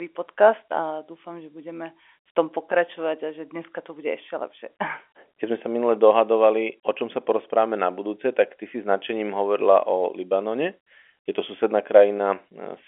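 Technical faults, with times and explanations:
No technical faults can be heard in this speech.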